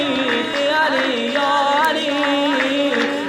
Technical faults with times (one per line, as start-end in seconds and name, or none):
0.53-0.55 skip ahead
1.66-2.85 jitter buffer speed-up